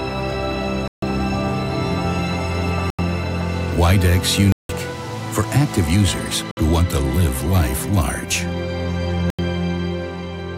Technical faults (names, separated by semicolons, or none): block of digital silence